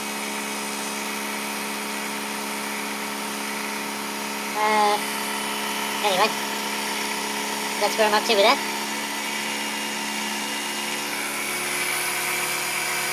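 From start to finish the audio runs about 1.45 times too fast and sits roughly 6.45 semitones high, the signature of a wrong sample rate. The samples were played back faster than they were captured, with no conversion, which fits material recorded near 22 kHz being played at 32 kHz. On a spectrogram every feature is shifted upward by that ratio and squeezed in time. The waveform shows events shorter and more tightly packed than natural.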